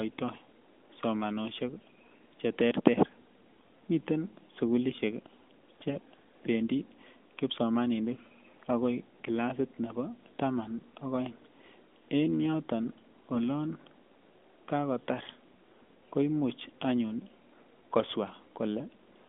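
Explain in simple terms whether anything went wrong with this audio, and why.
Three short bursts of AMR bit errors spoil this phone-quality speech: at 0.34 to 0.38 s, 3.54 to 3.68 s and 5.81 to 5.97 s. A weak mobile link flipped some of the less important bits, about one in twenty, so the decoder rebuilt the voice from slightly wrong instructions. The speech briefly turns hoarse, scratchy and gargly. Unlike a dropped packet, it never goes silent or stutters, and its pitch and loudness stay roughly right.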